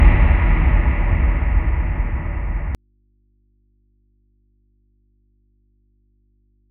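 A recording of sounds with an audio dropout to a faint residue at 2.75 s: the signal cuts out abruptly, leaving only mains hum roughly 40 dB down through the end, likely a lost source with the input path still live.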